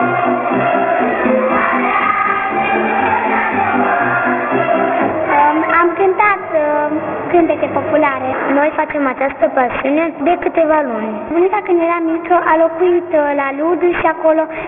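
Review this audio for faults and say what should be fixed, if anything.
Aliasing runs through the whole clip: content above 3 kHz folds back into unrelated, gritty tones that sit only somewhat below the signal. That fits a drop from 44.1 kHz to about 6 kHz with no anti-alias filter. Plain band-limiting would sound dull rather than metallic and inharmonic. To prevent it, low-pass below half the target rate before downsampling.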